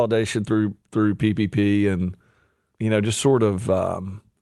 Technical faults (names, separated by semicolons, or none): clock drift between sender and receiver; repeated timing corrections